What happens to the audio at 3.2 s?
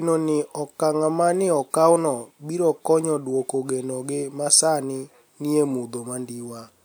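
Nothing goes wrong at 3.2 s; the speech carries on intact through that moment, with no dropout, click or distortion.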